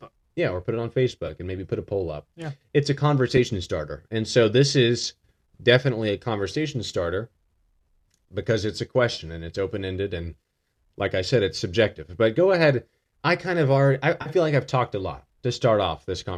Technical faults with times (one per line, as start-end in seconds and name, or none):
1.26-1.30 AAC frame loss with concealment
3.37 AAC frame loss with concealment
9.14-9.20 AAC frame loss with concealment
14.21-14.29 AAC frame loss with concealment